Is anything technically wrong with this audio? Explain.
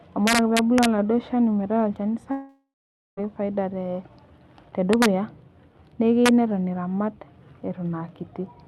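Yes. Integer overflow at 0.27–0.85 s, 4.93–5.06 s and 6.26–6.29 s: peaks about 4, 2 and 1 dB over the integer limit wrap to the opposite sign, causing violent cracks.

Long network dropout, 2.31–3.19 s: audio likely stopped arriving. The last sound trails off as a fading buzz, followed by 0.51 s of silence. The speech resumes with 0.86 s missing.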